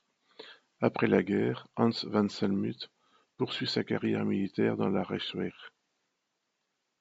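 No technical faults can be heard in this recording.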